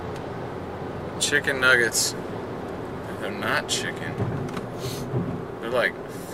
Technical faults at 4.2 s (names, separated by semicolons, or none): none